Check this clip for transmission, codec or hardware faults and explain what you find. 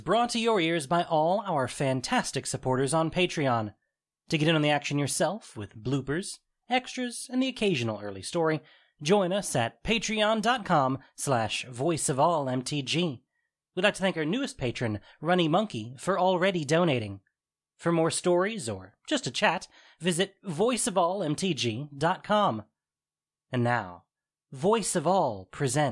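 No transmission, codec or hardware fault can be heard anywhere in this speech recording.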